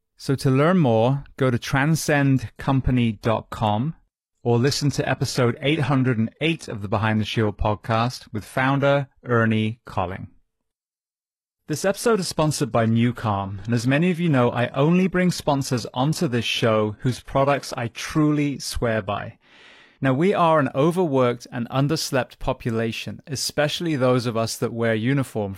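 After "learn more go to", at 2.16 s the adaptive stream drops to a lower bitrate until 20.16 s, before "we are an overworked". The speech turns dull, which points to a switch from AAC to low-rate HE-AAC. A spectrogram shows a sudden empty band above 12.3 kHz. The waveform has no gap.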